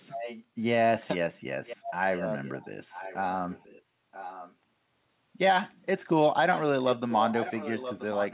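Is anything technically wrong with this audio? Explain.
Yes. An echo leak is audible at 0.12–0.44 s, 1.66–1.91 s, 2.14–2.52 s, 2.89–3.16 s, 3.49–4.55 s, 6.53–6.62 s, and from 6.95 s to the end. A copy of the speech returns about 0.98 s late and roughly 10 to 15 dB below it. The likely cause is a far-end loudspeaker whose echo canceller let its microphone pickup through. The band-limited, narrowband sound, with nothing above 4 kHz, points to a telephone codec such as G.711.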